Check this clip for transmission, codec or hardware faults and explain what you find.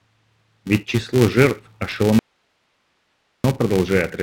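Two faults are present: a constant block-rate buzz and a sudden loss of the speech partway through.

Throughout the clip, a filter restarted on every block drops its stored state and begins each block from silence. Each restart leaves a small transient, so the speech carries a 345 Hz buzz, which fits a 128-sample block, and it grows and fades with the level of the speech.

From 2.19 s to 3.44 s, just after "число жертв", there is an audio dropout to a faint residue. The wanted signal was likely lost upstream while the path after the break stayed live. The speech cuts off abruptly for about 1.25 s, leaving only hiss roughly 45 dB below the speech, then returns just as suddenly.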